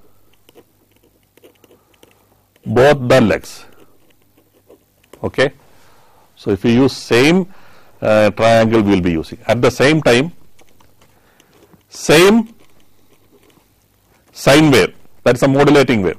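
No technical faults can be heard anywhere in this recording.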